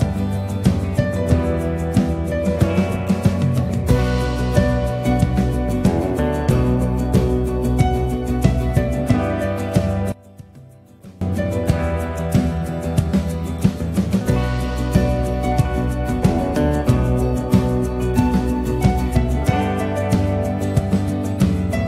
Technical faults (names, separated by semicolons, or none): one channel inverted